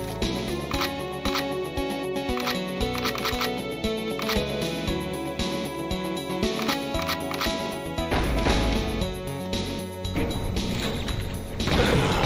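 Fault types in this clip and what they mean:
No technical faults present in this audio.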